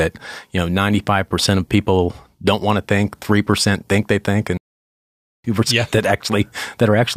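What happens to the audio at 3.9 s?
Nothing goes wrong at 3.9 s; the speech carries on cleanly through that moment with no break, glitch or change in level or tone.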